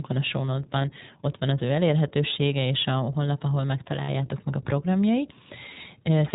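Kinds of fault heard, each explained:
iLBC codec: the speech passes through a narrowband VoIP codec at 15.2 kbps in 20 ms frames, each coded on its own, so nothing above 4 kHz survives and the voice comes across plainly rough and slightly synthetic, with the upper range missing throughout.
Lost iLBC frames: packets went missing, so the decoder filled each hole by repeating the last pitch cycle blended with noise, heard as a brief buzzy, held vowel at 0.82 s before "ott van az ő", around 4.04 to 4.09 s before "meg a programjai", and at 5.74 s after it.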